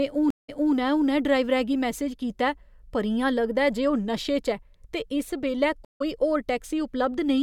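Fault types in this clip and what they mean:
Stream reconnect: the link broke and playback restarted on a fresh decoder. At 0.30 s, 180 ms of silence ends with speech repeated from 255 ms earlier; at 5.85 s, 155 ms of silence skips roughly a tenth of a second ahead. Unlike a simple dropout, the timeline jumps.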